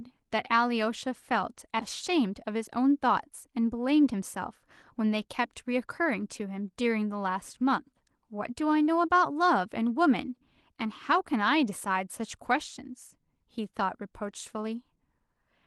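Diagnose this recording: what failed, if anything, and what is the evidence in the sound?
At 1.8 s the speech jumps abruptly forward, with roughly a second of audio missing and the two sides butted together with no gap or fill. This is a skip ahead at the network and jitter buffer stage: queued audio was discarded, pulling playback delay down by about a second.

From 2.10 to 4.14 s the speech runs about 6% fast at unchanged pitch, sounding slightly hurried. This is a jitter buffer speed-up: the receiver repeatedly cut out short pitch-period pieces, removing about 150 ms in total to shrink an overfull buffer.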